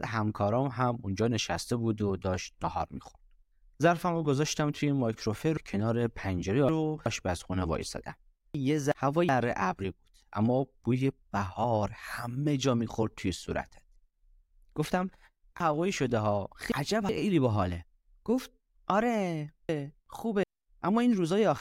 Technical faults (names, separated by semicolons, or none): chunks out of order